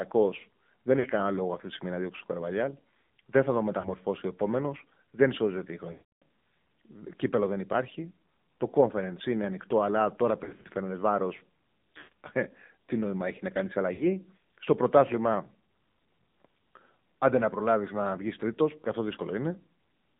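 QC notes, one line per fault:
Throughout: AMR narrowband mobile codec. The sound is confined to about 150 Hz to 3.7 kHz and has a buzzy, synthetic edge, which points to a low AMR-NB mode near 7.4 kbps. The spectrogram is empty above the 3.7 kHz ceiling, and harmonics look smeared and coarse.
0.99–1.08 s, 3.80–3.89 s, 5.92–6.22 s, 10.44–10.66 s, 11.98–12.12 s, 13.94–14.08 s: lost AMR speech frames. The decoder repeats its last good settings with falling gain. The 40 ms gaps at 0.99 and 3.80 s and the 60 ms gap at 13.94 s are brief dips or warbles, each fitting a few 20 ms frames. The 300 ms run at 5.92 s drags out and fades to silence. The losses at 10.44 s are scattered over 200 ms, and those at 11.98 s total 140 ms. On the waveform, amplitude sags or drops to flat silence, and the spectrogram shows frozen, smeared bands.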